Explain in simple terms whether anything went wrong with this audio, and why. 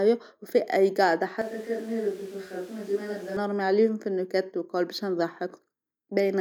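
From 1.42 to 3.37 s, the speech suddenly turns hollow, thin, quieter and noisier. This is a switch to a distant microphone, likely a faraway one standing in.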